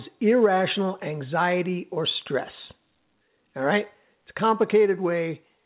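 No technical faults can be heard in this speech.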